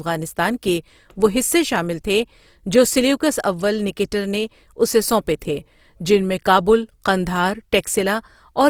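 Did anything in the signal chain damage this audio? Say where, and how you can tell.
Yes. Throughout, the speech sounds grainy and rough, with a noisy sheen over tonal parts while content still reaches about 20.4 kHz. That points to codec damage, likely Opus compression in CELT mode at a rate that fits 24 kbps, filling starved bands with noise.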